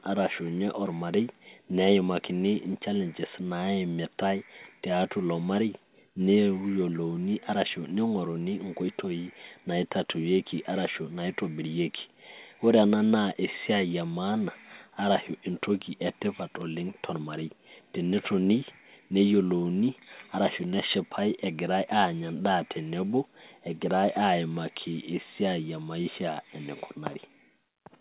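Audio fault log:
Nothing stood out on listening to this speech clip.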